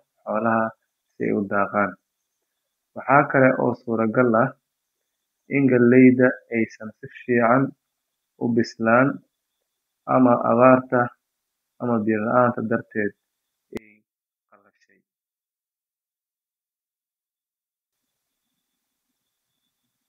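One channel inverted, 13.77 to 17.93 s: the speech falls about 32 dB to a faint trace, likely from reversed polarity on one stereo channel cancelling in mono.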